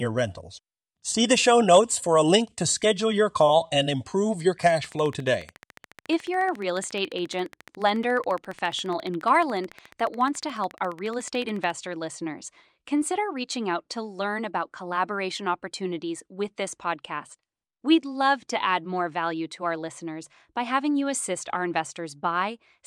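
From 4.63 to 11.71 s a train of clicks ticks evenly at 14.1 per second, near speech level, likely interference; crackle would be irregular.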